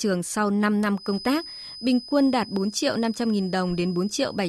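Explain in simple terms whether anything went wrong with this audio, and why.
Something likely went wrong with the loop between a loudspeaker and the microphone: the microphone was picking up its own amplified sound, and the system was balanced right on the edge of feedback. This produces a feedback whistle. From about 0.92 seconds until the end of the speech at 4.48 seconds, a thin, steady tone near 5 kHz sits quietly behind the voice, well below it in loudness, wavering slightly but never growing into a full howl.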